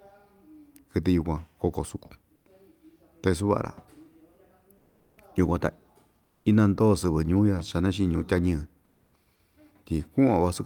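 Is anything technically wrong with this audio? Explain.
Yes. During speech pauses, the sender likely switched to discontinuous transmission, and the receiver filled the gaps with comfort noise in place of the background. At 2.35–2.45, 4.77–5.17, 6.23–6.45 and 8.85–9.13 s, the real background becomes steady, featureless noise, up to about 4 dB quieter.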